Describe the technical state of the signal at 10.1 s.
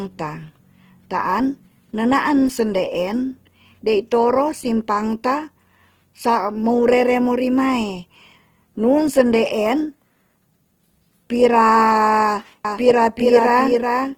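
At 10.1 s the speech carries Opus compression running through the whole clip: grainy, rough, noisy texture, likely from a low-rate CELT encode around 16 kbps filling starved bands with folded or noise content. A spectrogram shows smeared, speckled harmonics without empty holes, reaching about 20.2 kHz.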